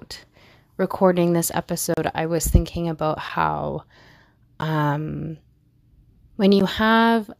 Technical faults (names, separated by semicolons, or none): block of digital silence